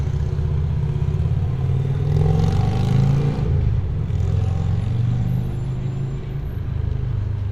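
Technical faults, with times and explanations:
1.15 s and 5.20 s: damaged data in a compressed stream. Each time, a brief blip cuts through the sound, lasting about 12 to 16 milliseconds. Part of the compressed data there is wrong. The decoder cannot read those bytes as valid audio frames, so it either plays garbage or drops them. It then loses its place and hunts for the next frame header. That short burst of misdecoded or missing audio is heard as the glitch.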